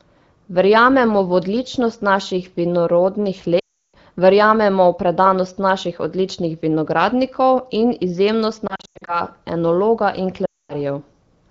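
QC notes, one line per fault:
3.59–3.95 s, lost AMR speech frames: right after "v odličnost naših vinorodnih" about 340 ms drops out in one run. The decoder stretches the last good frame with falling gain, and being AMR wideband it fades to silence quickly. Sound comes back weak or rough before "verjamemo v predanost naših".
8.67–9.21 s, lost AMR speech frames: after "odličnih vinogradnikov in izjemnost" there's a scattered patch, about 240 ms lost over roughly 400 ms, with the longest gap 100 ms. You hear a series of short dips and warbles rather than a clean gap, leading into "enologa in".
10.46–10.74 s, lost AMR speech frames: just after "enologa in" there's another solid 240 ms run. The concealment smears the sound, then it decays to quiet, leaving a hole. Around it the 15.85 kbit/s AMR-WB coding adds only light colouring.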